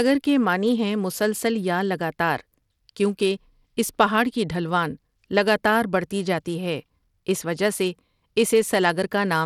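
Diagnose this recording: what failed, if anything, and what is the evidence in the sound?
Bluetooth SBC compression, likely, at the codec stage, across the whole speech clip: plainly audible gritty quantisation noise and flickering treble, consistent with a starved bit pool near 96 kbps, where SBC's few sub-bands get coarse bit allocation and the upper bands lose detail.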